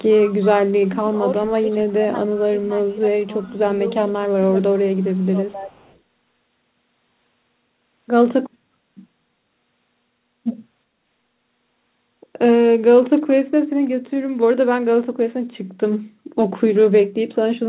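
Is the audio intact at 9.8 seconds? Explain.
Yes, the speech is intact at 9.8 seconds, with nothing missing or damaged there beyond the ordinary narrow band of a G.711 call path, which leaves nothing above 4 kHz.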